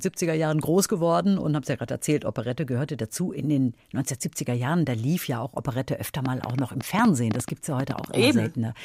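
From 6.26 s to 8.05 s, a train of clicks runs over the speech. There are about fifteen of them, near 7.8 per second, at an uneven pace. Each click has much the same sharp shape. The peaks stand roughly 15 dB above the speech, so they cut through clearly. They are heard as a ragged ticking, in the gaps as well. The likely cause is interference from nearby equipment or a faulty connection or power supply.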